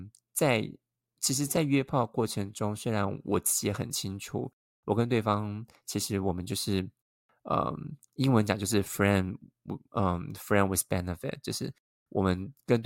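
No technical faults are audible.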